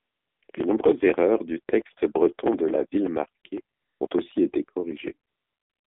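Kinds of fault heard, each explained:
AMR narrowband mobile codec: throughout, a 7.4 kbps mobile speech coder squeezes the speech into roughly 200 Hz to 3.5 kHz, with plainly audible buzzy, synthetic coloration.
AMR comfort noise: at 0 to 0.42 s, 0.44 to 0.48 s, 0.52 s, 3.76 to 4.0 s, 4.08 s before "aussi été" and 5.3 s to the end, speech frames stop and smooth synthetic noise stands in.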